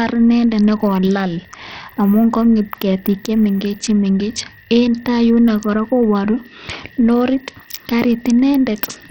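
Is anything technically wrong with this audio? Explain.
Yes. Throughout the speech there is heavy Bluetooth SBC compression damage, likely from a starved bit pool that points to roughly 64 kbps. The treble flickers in and out over a gritty haze. A spectrogram shows patchy, blocky high bands with gaps above the lower sub-bands.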